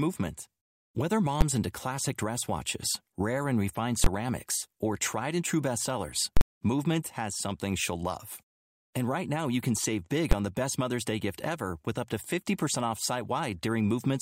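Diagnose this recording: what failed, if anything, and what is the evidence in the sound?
The failure is in the processing stage, where invalid numbers at full scale break through into the speech. There's a single sharp bang at 1.41 s and another at 10.32 s, each about 11 ms, which fits a 512-sample block. Longer hits land at 4.04 to 4.06 s and 6.37 to 6.41 s, pointing to 1024- and 2048-sample blocks. Some calculation blew up to infinite or invalid values, and each block got pinned at one extreme value, so the output slams far beyond the speech's peaks.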